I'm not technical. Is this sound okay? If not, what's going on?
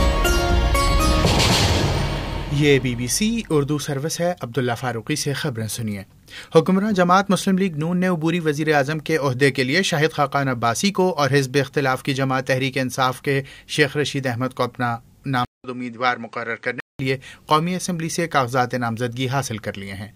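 No. At about 15.45 s there's a short gap, just under a fifth of a second, then the sound turns duller and a bit quieter, with a faint new background hiss, until about 16.99 s. That's likely the input switched to a poorer device.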